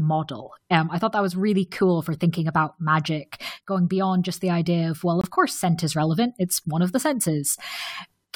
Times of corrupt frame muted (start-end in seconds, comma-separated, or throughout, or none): 5.21-5.26